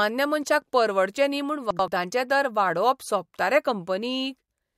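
Chunks out of order at 1.71 to 1.88 s in this speech clip, between "मनशाक परवडचे न्ही म्हूण" and "दर वाडोवप": one 85 ms chunk of audio arrived one chunk late and plays after its successor, so the moment sounds jumbled, with three hard joins.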